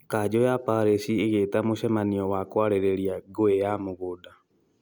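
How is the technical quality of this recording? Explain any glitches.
No glitches turn up anywhere in this speech recording. Nothing interrupts or disturbs the audio at any point.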